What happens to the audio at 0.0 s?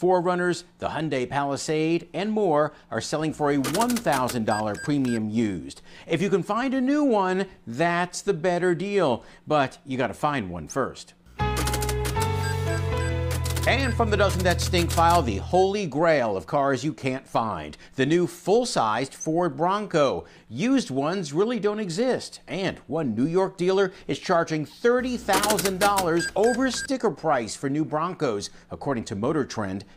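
Nothing goes wrong at 0.0 s; the audio starts cleanly with no fault at that point.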